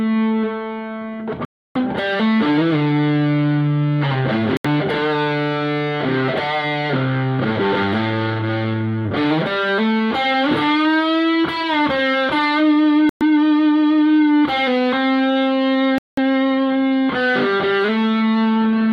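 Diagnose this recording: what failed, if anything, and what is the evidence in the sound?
Four silent gaps, at 1.45, 4.57, 13.09 and 15.98 s, lasting 76 to 304 ms. Sound resumes afterwards. Likely a Bluetooth stall: the headphone buffer emptied while awaiting resent packets.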